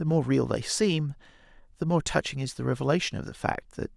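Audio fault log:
No faults are heard in this speech clip.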